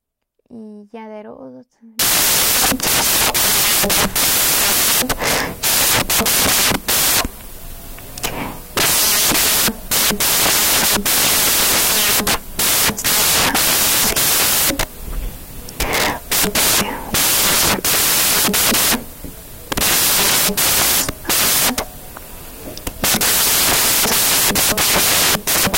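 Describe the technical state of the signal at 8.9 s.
At 8.9 s the speech is corrupted by samples built from the wrong bytes, a fault running from 1.99 s to the end. Misassembled bytes turn the low bits into each value's bulk, giving loud, harsh broadband noise: a dense waveform and a flat, broadband spectrogram.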